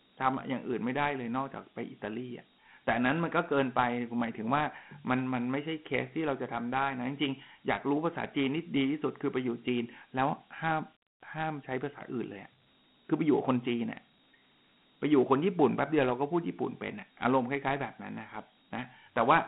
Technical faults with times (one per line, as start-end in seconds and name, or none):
0.00-19.48 Dialogic VOX ADPCM